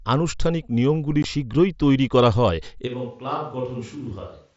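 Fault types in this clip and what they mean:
Unconcealed Bluetooth headset packet loss: At 1.23 s, between "আনুষ্ঠানিক নিয়মগুলি" and "শীঘ্রই তৈরি করা হয়", a 15 ms hole opens in the speech. Audio carried from headset to phone in small packets lost a short stretch in transit, and nothing was done to hide the gap. Silence or an idle pattern took its place, leaving a brief dropout with abrupt edges. Its length fits two lost frames of the mSBC link.
Switch to a distant microphone: From 2.88 s to the end, starting just after "শীঘ্রই তৈরি করা হয়", the speech suddenly turns roomy and hollow and thinner in the low end. Its level drops by about 10 dB, and faint background noise sits well below the speech. The likely cause is that the close microphone stopped feeding the recording and a microphone further from the talker took over.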